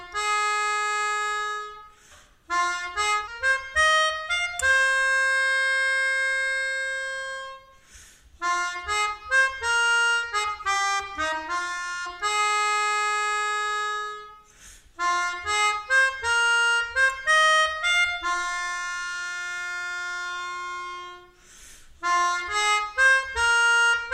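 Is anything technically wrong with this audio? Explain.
Yes. At 3.27 to 3.31 s, the sound jumps abruptly ahead with a brief blip. A stream segment was likely skipped after failing to load.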